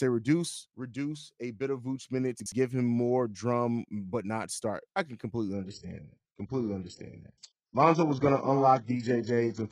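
At 2.4 s, just before "give him more drum", there's a short jumbled moment lasting until about 2.52 s. That's chunks out of order: a 60 ms chunk of audio turned up one chunk late and got played after the one that should have followed it. Nothing is actually missing, but the sequence is swapped, so you hear a brief garble where the pieces butt together at the hard joins.

Then from 5.53 s, right after "not start I can", and running to the end, the sound abruptly goes dull and papery. This is an adaptive stream at a lower bitrate: the player switched down to a cheaper version, most likely because the connection slowed. There's no gap, just a sudden drop in quality. Nothing comes through above 8 kHz, and codec artefacts swirl around. It sounds like a jump from a decent AAC stream to a very low-bitrate HE-AAC one, somewhere near 8 kbit/s.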